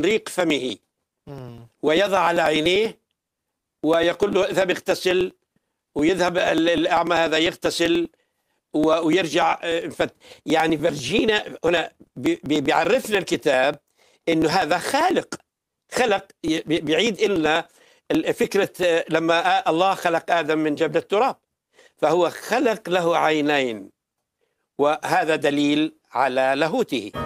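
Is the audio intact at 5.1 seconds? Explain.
No. At 5.1 seconds the audio sits inside a run of periodic USB or driver dropouts lasting from 0.11 to 18.83 s. Something blocks the USB bus or the audio driver every 0.098 s, and each time roughly 2 ms of audio is skipped outright, not replaced by silence, giving about two hundred small splices. These are heard as a steady tick about ten times a second whenever sound is present. That strict, even spacing is what separates them from random clicks or irregular buffer underruns.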